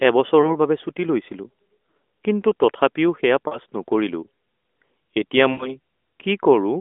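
Lost AMR speech frames occur at 0.42 to 0.55 s, 3.48 to 3.59 s and 5.52 to 5.77 s. The decoder conceals each gap by repeating the last good frame with falling gain. The first is a brief dip. The last, about four frames' worth, drags out and fades before the speech returns weak.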